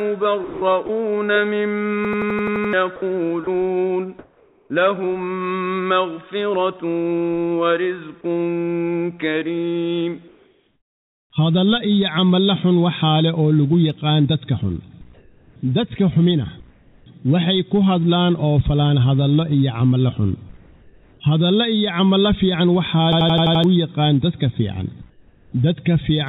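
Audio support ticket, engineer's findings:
Sound chopped by the voice detector, 0.44–0.89 s and 2.96–3.47 s: edges clipped and filled with synthetic noise (210 ms, 90 ms), likely sender VAD toggling mid-sound. Unlike comfort noise in gaps, it eats actual sound.

System hang loop, 2.05–2.73 s and 23.13–23.64 s: an 85 ms slice repeats identically (8 and 6 times), a stutter at about 11.7 Hz, which fits a 4096-sample ring buffer. Exact repetition separates it from noise fill.

Comfort noise in place of the background at 4.19–4.70, 10.28–11.30, 15.14–15.56, 16.70–17.06, 20.57–21.20 and 25.10–25.52 s: the real background is swapped for a flat, featureless hiss, likely from DTX noise generation. Only pauses are affected, not sound. Level shifts by about +3, 0, +1, −1, −2 and −9 dB. The bandwidth stays capped at 4 kHz throughout by the G.711 call path.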